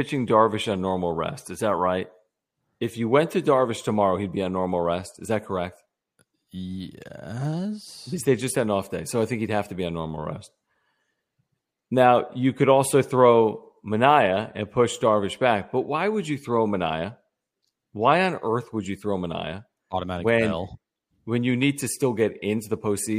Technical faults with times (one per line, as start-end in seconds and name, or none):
none